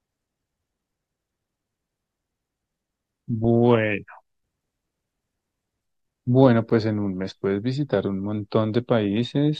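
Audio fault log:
6.70 s, gap between stream segments: a brief hole of about 9 ms with hard edges cuts into the speech. The time stamps of two adjacent segments, which appear to run about 4 s long, don't quite meet, leaving 8.5 ms that no segment covers. The player fills that span with silence, so the sound drops out abruptly and resumes just as abruptly. Nothing is missing from the recording itself; the clip simply runs 8.5 ms longer.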